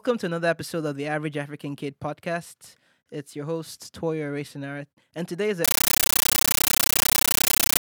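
From 5.65 s to the end, the speech is replaced by very loud, chattering static: 13.3 ms noise bursts separated by silence, 31.25 times a second. This is a compressed stream played as audio. The pattern fits an undecoded AC-3 bitstream read as raw samples.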